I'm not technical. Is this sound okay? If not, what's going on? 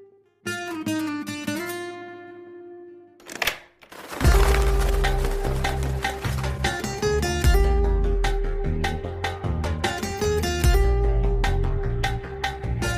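Yes, this sound is okay, with nothing going wrong in it.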